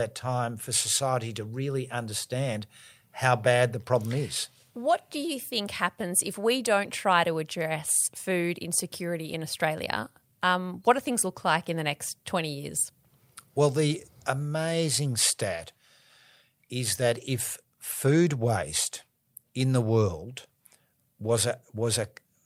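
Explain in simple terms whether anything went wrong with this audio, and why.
Nothing went wrong here; the recording has no faults.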